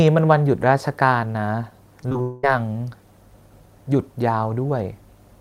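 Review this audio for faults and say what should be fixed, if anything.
Short concealed packet loss occurs at 2.03 s, from 2.09 to 2.12 s, and from 2.13 to 2.15 s. Each gap lasts 10 to 20 ms. The receiver filled each one by extending the preceding sound, then blended back. You hear brief smears or wobbles. A larger jitter buffer or forward error correction would prevent this.

A long network dropout follows from 2.21 to 2.44 s. For about 0.22 s the speech is replaced by a continued, fading buzz or hiss. There is no silent stretch before the audio resumes. The likely cause is a burst of lost packets. A more stable network path or redundant packet transmission would prevent it.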